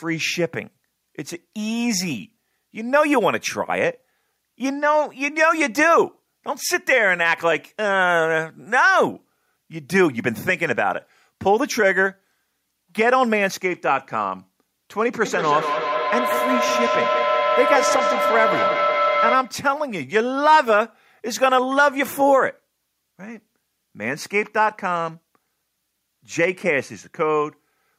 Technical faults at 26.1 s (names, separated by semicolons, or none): none